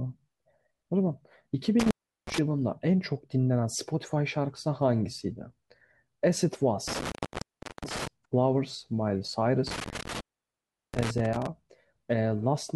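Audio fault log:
1.80–2.38 s, 6.88–8.07 s, 9.67–11.46 s: intermittent contact. A loose connection opens, and the speech cuts out for about 0.37 s, 0.72 s and 0.73 s, leaving faint hiss. Unlike clean digital dropouts, each gap has ragged crackle at its edges as the contact scrapes.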